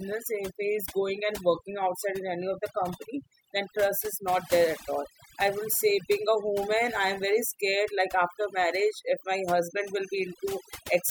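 Throughout, the speech sits over a near-silent background flecked with twinkling specks, the mark of overdone noise removal cutting bands together with quieter voice detail.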